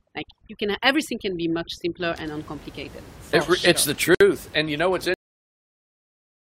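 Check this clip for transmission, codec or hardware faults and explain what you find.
Three faults are present: overdone noise removal at the start, one gap at a join of encoded pieces, and a cut-off end.

Overdone noise removal runs from 0.0 to 2.0 s, just before "and uncomplicated". The noise reducer was set too hard. It switched off single frequency bands that sat near its noise estimate. Quiet parts of the speech went with them. The background drops and breaks up into twinkling specks. The room noise, about 21 dB below the speech, is what it was fighting.

A gap at a join of encoded pieces opens at 4.15 s and lasts about 59 ms, to 4.21 s. The audio was encoded in separate pieces, roughly every 6 s, and joined without trimming. The encoder's start-up delay and end padding stayed in. So continuous speech breaks into a short silence. Its edges are smeared by the codec. The speech then resumes exactly where it stopped.

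A cut-off end occurs at 5.14 s, right after "you know what's". The final buffers were never written or played. The speech stops mid-sound. It falls straight to digital silence with no natural decay. That silence runs to the end of the clip. Nothing of the interrupted sound trails off, so the stop is sharp and unnatural.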